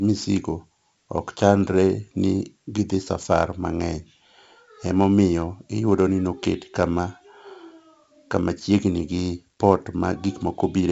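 Speech with heavy 4-bit ADPCM compression throughout: gritty hiss rides every loud syllable, and the spectrogram shows level-following noise fill and nothing above 7.8 kHz.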